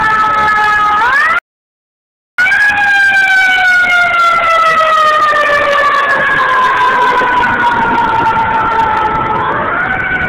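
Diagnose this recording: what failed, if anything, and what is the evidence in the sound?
The playback stage most likely starved for data or had its thread blocked, leaving the output with nothing to play. The sound cuts off mid-flow at 1.39 s and stays silent for about 1.0 s, resuming at 2.38 s. This is a playback stall.

To recover the lost time, the player then applied time-compressed catch-up, cutting small slices from its backlog and cross-fading the joins. From 2.38 s to 5.38 s the audio runs hurried at 1.15x, pitch unchanged.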